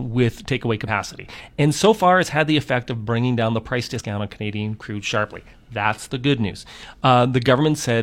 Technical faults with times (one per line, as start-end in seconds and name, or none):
0.84-0.89 damaged data in a compressed stream
3.95-4.01 damaged data in a compressed stream
6.46-6.52 damaged data in a compressed stream